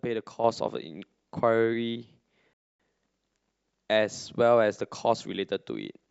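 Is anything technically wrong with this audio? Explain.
Yes, there are two faults. At 0.44 s a sudden gain jump raises the level by about 6 dB until the end. Speech and background noise step up together at once rather than fading, which likely points to a gain setting applied without a ramp. From 2.53 to 2.80 s a rebuffering stall cuts to silence when the player runs out of audio. It then resumes exactly where it stopped, unlike a dropout, so nothing is lost and about 0.26 s is added.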